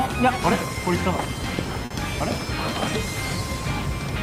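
A late packet emptied the jitter buffer around 1.85 to 1.92 s, causing a short stall: the sound is stretched for about 50 ms, then resumes with nothing lost.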